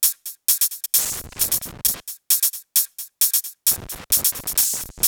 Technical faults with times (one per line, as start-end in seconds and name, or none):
0.99-2.00 loose connector crackle
3.71-5.08 loose connector crackle